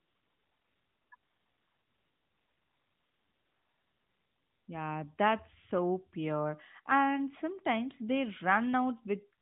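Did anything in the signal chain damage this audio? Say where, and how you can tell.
Yes. At the codec stage, discontinuous transmission stopped sending speech frames from 0.0 to 1.12 s and from 1.16 to 4.68 s; AMR comfort noise replaced the real background with smooth synthetic hiss that switches abruptly.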